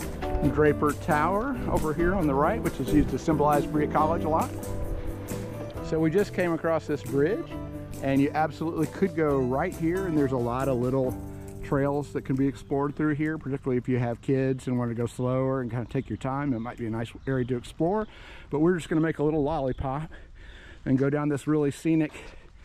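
Nothing in the audio stands out as a technical fault, so there's nothing here to flag.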